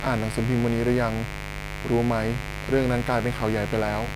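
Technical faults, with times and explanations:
Throughout, mains buzz: a steady, raspy buzz sits under the speech at a fairly high level, roughly 10 dB below it. It is locked to 50 Hz mains, and sharp spikes leak in twice per cycle, probably from a dimmer, rectifier or unshielded cable. Those spikes spread harmonics up into the kilohertz range. That is why it rasps, unlike a plain hum, which would be a smooth, low tone.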